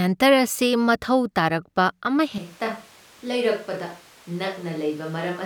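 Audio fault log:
2.38 s to end, switch to a distant microphone: right after "ꯃꯊꯧ ꯇꯥꯔꯛꯄ" the speech turns suddenly roomy and hollow, loses bass, drops by roughly 10 dB, and sits over room noise only about 25 dB below it. The likely cause is the close microphone dropping out, leaving a pickup further away. A plain gain drop would keep the same tone, and added reverb would not thin the low end or raise the background; here all three change at once.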